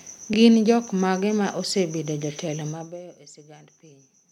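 At 0.33 to 0.35 s there are repeated frames: a 23.2 ms block of compressed speech is decoded twice in succession, consistent with a single frame being duplicated. It is heard as a brief stutter, and the audio runs 23.2 ms longer.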